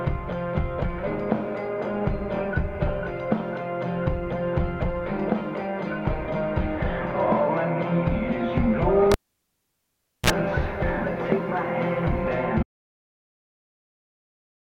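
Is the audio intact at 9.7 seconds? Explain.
No. At 9.7 s the audio falls inside a cable pulled and plugged in fault running from 9.12 to 10.30 s. A live lead is yanked out, so a pop is followed by about 1.13 s of near silence with the signal path broken. As it goes back in, the tip touches first and picks up a brief 60 Hz mains buzz lasting about 38 ms, then a second pop marks the sound returning.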